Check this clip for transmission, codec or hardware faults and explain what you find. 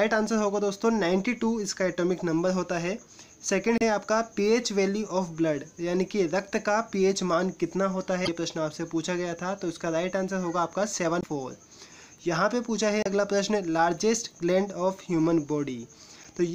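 One codec fault recurs: damaged data in a compressed stream, at 3.78–3.82, 8.24–8.29, 11.20–11.24, 13.03–13.07 and 16.21–16.26 s. Corrupted bytes make the decoder lose frame sync, giving brief glitches of about 40 ms each.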